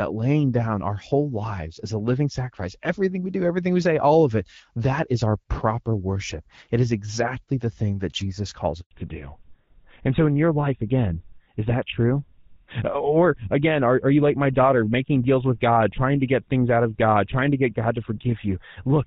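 At 8.81 s the speech cuts out for about 100 ms, up to 8.91 s. That's a handover gap: the call was being passed between networks, no speech frames got through during the switch, so the sound just drops to silence and whatever was said there is gone.

Right after the gap, from 8.91 s to the end, there's a fallback to narrowband. Before the switch the HD Voice path sounds clear with only light coding wear, which fits AMR-WB at around 12.65 kbit/s. After it, nothing above 4 kHz survives, and the duller, rougher quality points to GSM full rate at about 13 kbit/s.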